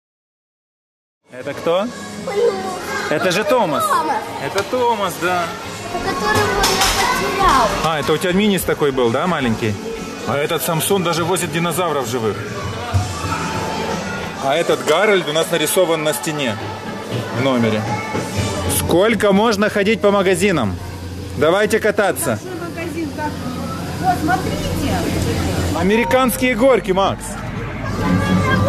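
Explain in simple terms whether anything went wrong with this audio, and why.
Nothing went wrong here.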